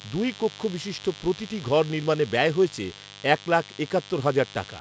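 A speech recording carries a steady, raspy mains buzz for its whole length, sitting roughly 20 dB below the speech. Switching spikes at twice the 50 Hz mains rate spread harmonics well up the spectrum, which is why it rasps rather than hums. The call-style microphone processing limits content to below 8 kHz.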